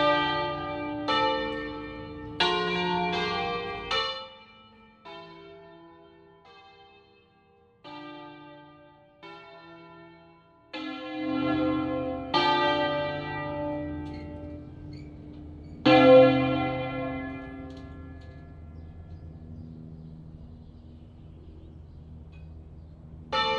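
No technical faults can be heard in this audio.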